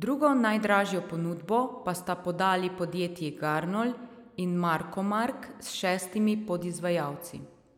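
It's a speech recording, and there's nothing technically wrong to point out here, no problems turn up anywhere along the way.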